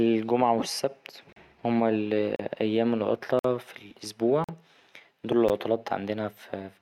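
A gap between stream segments recurs roughly once per second: 1.33–1.36 s, 2.36–2.39 s, 3.39–3.45 s, 4.44–4.49 s, and 5.49 s. Segment timestamps fail to meet, so the player inserts silence, giving hard-edged dropouts of 13 to 52 ms without losing any speech.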